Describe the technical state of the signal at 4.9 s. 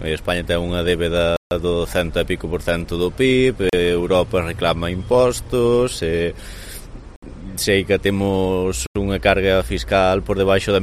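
At 4.9 s the signal is intact, with no fault to be heard at that moment.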